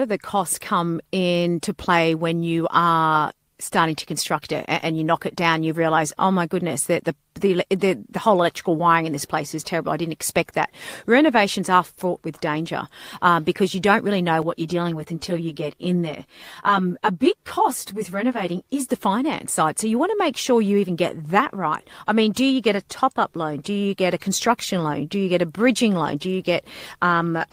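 From 14.42 to 18.88 s the speech turns hollow and phasey, losing body. This is channel delay (comb filtering): one channel lags by around 10 ms, and summing to mono carves evenly spaced notches, the first near 40 Hz, up the spectrum.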